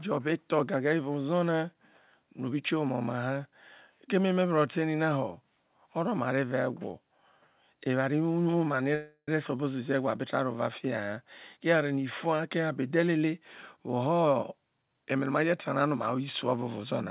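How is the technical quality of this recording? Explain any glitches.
Two playback glitches stand out, on a band-limited call path. Nothing is heard above 4 kHz, which fits a narrowband telephone codec such as G.711 A-law.

From 8.95 to 9.29 s there is a call audio freeze. The speech stops and the last sound carries on as a fading buzz or hiss. About 60 ms of that stretch is silent. Packets were likely held up in transit, so the jitter buffer ran dry. The receiver filled the wait, about 325 ms in all. Then speech resumes where it stopped. Nothing is lost. The rest of the audio is simply pushed 325 ms later.

From 12.91 to 13.16 s there is a jitter buffer speed-up. The speech runs at about 113% speed, yet the pitch stays the same. It sounds briefly hurried. The buffer was holding more audio than it wanted. To shrink the delay, the receiver cut out short pitch-period pieces, several in a row. 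Roughly 40 ms was removed in that quarter second.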